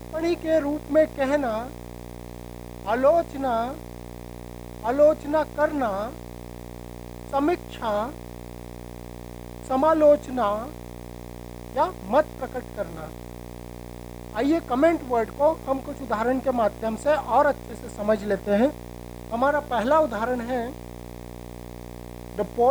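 From the very start and throughout the clip, a steady buzz sits under the audio at 60 Hz with a layer of hash above it, fairly prominent at roughly 15 dB below the signal. This is video or display buzz: a screen or video cable coupling into the audio path, repeating at the picture's field rate.

Also throughout, the sound is coated in a grainy distortion that shifts with the signal, roughening quieter passages. The error sits at roughly 30 dB below the signal. This is likely low bit depth without dither: values rounded without dither, which fits an 8-bit signal.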